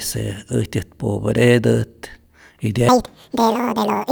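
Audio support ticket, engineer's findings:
Audio read two samples at a time (double speed) from 2.89 s to end. Speech runs 2x fast, pitch up 12 semitones. Likely reader frame-width mismatch.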